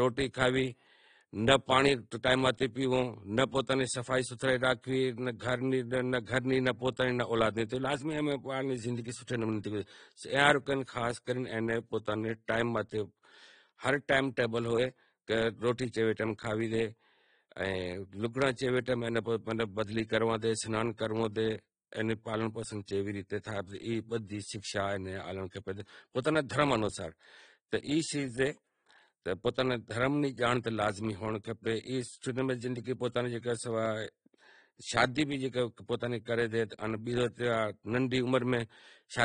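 Throughout the speech, the top end stops at about 9.7 kHz. The sound is dull, with plainly audible warbling and fizz on sibilants. The cause is likely AAC compression, AAC-LC at a bitrate that fits 32 kbps. Too few bits forced a lower cut-off and coarse quantisation.

At 5.39 s there is pre-echo. A short hiss runs for about 17 ms before a sharp onset. The codec spread its quantisation noise across the whole block, so noise meant for the loud attack leaks into the quiet moment before it.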